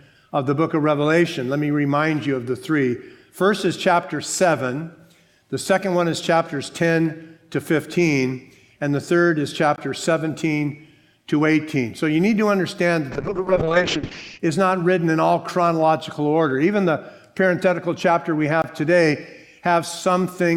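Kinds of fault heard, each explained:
Block of digital silence: Twice, at 9.76 s and again at 18.62 s, the sound drops out completely for about 20 ms and then snaps straight back. There's no fade on either side, so each gap comes across as a short hole.
A zeroed block this short points to the output buffer not getting filled in time.
Call bitrate drop: From 13.12 s to about 14.45 s the audio suddenly turns rough and muffled. The top end collapses from full range down to around 8 kHz, and the rest gets that coarse, watery texture. It stays at its worst for roughly 1.3 s before clearing. That's the encoder being told to spend far fewer bits, consistent with a fall from about 96 kbps to something near 6 kbps.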